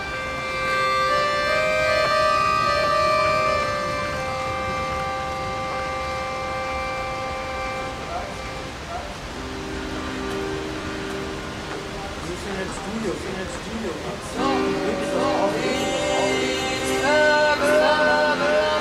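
Right from the start there's a doubled audio track: a second full-band copy sits roughly 0.7 s behind the first at about the same level, dry and without any room tail. That's likely an echo from a slower capture path or a misaligned edit.

On top of that there are lost LE Audio frames. Short dropouts at 2.05 s and 5.72 s each fit a single 10 ms frame going missing. There's a 40 ms gap from 10.81 to 10.85 s, and a scattered patch from 12.69 to 12.77 s, where the longest run is around 30 ms. In each, the LC3 decoder patches over the hole by replaying the last spectrum with scrambled phases, so tonal parts blur into a brief noisy smear. The light lossy compression underneath is working normally.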